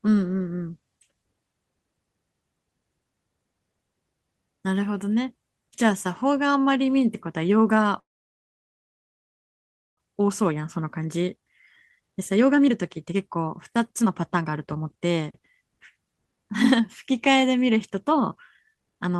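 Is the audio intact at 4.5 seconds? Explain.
Yes, the audio is intact at 4.5 seconds, with no audible fault at that point.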